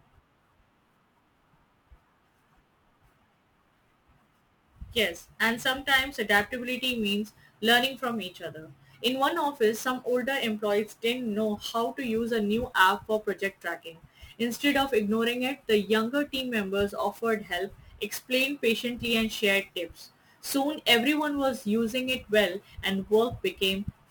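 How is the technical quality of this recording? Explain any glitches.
The recording's technical quality is compromised by one fault present across the whole clip.

Sample clock jitter, throughout: the converter's clock wanders by roughly 10 microseconds, so samples land slightly early or late. Steep, fast-changing parts of the speech take the biggest errors, adding a hiss or roughness about 20 dB below the voice that swells on loud, bright sounds and disappears in pauses.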